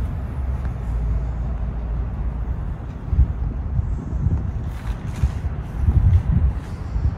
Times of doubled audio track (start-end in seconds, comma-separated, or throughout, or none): none